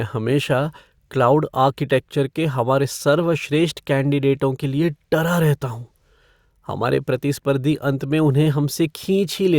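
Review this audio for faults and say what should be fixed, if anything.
Nothing stood out on listening to this speech, so there is nothing here that needs fixing.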